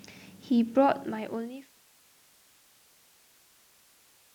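The speech signal is technically sound, with its level easing smoothly down in an editor-style fade-out from around half a second to 1.82 s.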